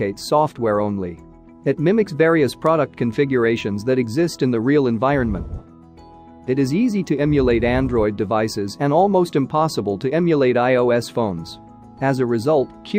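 At 2.66 s there is a bit error spike. A flipped bit in memory or on a digital link threw three consecutive samples off by a power of two. They then snapped back. The result is one sharp, broadband tick, peaking at about -18 dBFS, unrelated to the surrounding sound.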